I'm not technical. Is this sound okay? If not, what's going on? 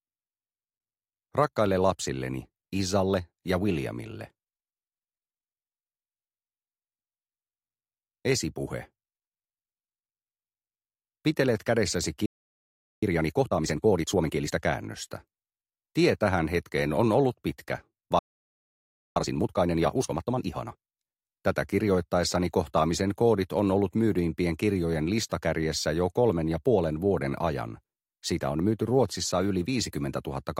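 No. Twice the player most likely ran short of incoming data, or was briefly held up, and had nothing to play. This is a playback stall: the sound cuts to silence from 12.26 to 13.03 s (about 0.76 s) and again from 18.19 to 19.16 s (about 0.97 s).

After each gap the player tries to make up the lost time by trimming out tiny slices and blending the joins. This is time-compressed catch-up: from 13.03 to 14.55 s and from 19.16 to 21.10 s the sound runs at 1.5 times normal speed, hurried but not higher in pitch.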